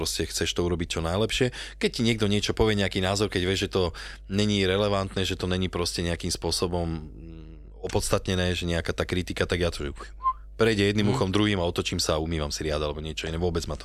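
Right from the start and all the way through, there's mains hum under the speech: a steady 50 Hz drone with some low harmonics, sitting roughly 20 dB below the voice. It sounds like a ground loop or a nearby transformer bleeding the power line into the signal.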